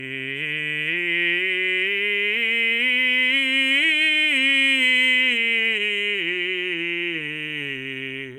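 Music clip, with no technical faults to report.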